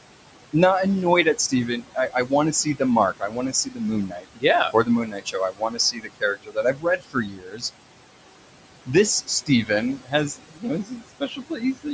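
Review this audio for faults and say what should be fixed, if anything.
The noise suppressor runs through the whole clip, pulling the steady background down by about 18 dB wherever it judges the frame to be noise. Because that decision changes from frame to frame, the room noise, which sits about 14 dB under the speech, drops away in the gaps and swells back in under each phrase. A gentler suppression depth or a slower-tracking noise estimate would prevent this.

In three places the same suppressor treats speech as noise and turns it down with the background. From 1.83 to 2.31 s it clips about 0.1 s of sound by up to about 11 dB. From 3.18 to 7.63 s roughly 2 s in total is pushed down by as much as about 18 dB. From 9.24 to 11.86 s about 1 s suffers the same 18 dB-deep cuts. Soft consonants and word tails there sound swallowed or faint. Loosening the suppressor's speech/noise threshold so quieter speech stays classed as voice would prevent it.

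At 8.98 to 9.00 s a single loud pop lands on top of the speech, peaking around 10 dB above the signal, with the talk carrying on underneath. It is a brief electrical pulse entering the chain, likely from a plug, switch, static discharge or driver glitch, shaped by the circuitry after it into a sharp click. Securing connections and avoiding switching or cable handling during recording would prevent it.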